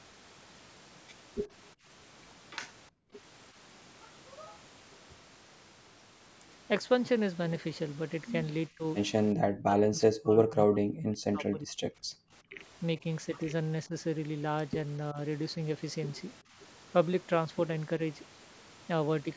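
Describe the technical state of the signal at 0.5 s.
At 0.5 s the speech signal is intact, carrying only the ordinary shaping of call microphone processing, with the lowest bass trimmed and nothing above 8 kHz.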